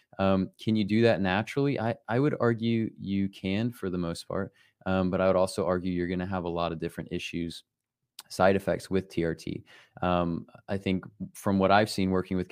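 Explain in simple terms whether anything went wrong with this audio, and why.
Nothing went wrong with this recording, as no technical faults can be heard anywhere in it. The speech comes through steadily, with no dropouts, jumps or unexpected noises along the way.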